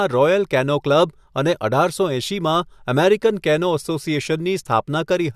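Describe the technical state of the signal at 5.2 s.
At 5.2 s the speech signal is intact, with no audible technical fault at that moment.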